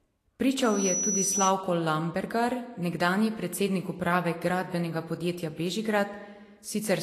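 From the first moment the speech carries a grainy, hissy texture, with sibilants smeared into noise and consonant onsets softened. This points to, likely, Vorbis compression at a low bitrate in the region of 34 kbps: the treble detail has been quantised so coarsely that it comes back as noise-like energy. On a spectrogram the upper bands look blotchy and speckled rather than finely structured, and everything stops at a flat ceiling of 14.2 kHz.

From 0.63 s to 1.54 s a loudspeaker feedback squeal cuts in, a single piercing tone at 5.9 kHz. A microphone was picking up the loudspeaker it fed, and at that frequency the loop gain passed one, so the tone fed on itself. It swells over roughly a third of a second until it is about as loud as the speech, then stops. A spectrogram shows a thin, bright horizontal line at 5.9 kHz, and the waveform's envelope bulges over that stretch.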